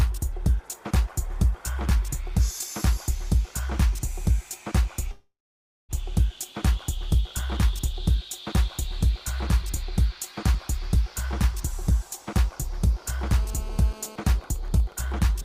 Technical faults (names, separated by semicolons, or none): long network dropout; GSM phone buzz; GSM signalling bursts